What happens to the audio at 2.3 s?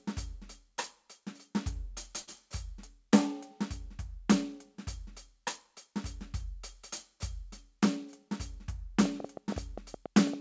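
Right around there you're hearing a burst of packet loss, running from about 2.22 to 2.29 s. A short run of the music's packets never arrived in time, so the receiver papered over the hole by stretching the last bit it had and fading it down for roughly 54 ms. The music then picks up again, but about 60 ms further on, so that slice is simply gone. On top of the G.722 call sound with nothing above 8 kHz, it comes across as a brief smeared, dying tail followed by a small jump forward.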